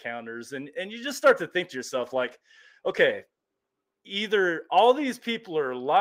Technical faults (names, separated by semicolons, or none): call bitrate drop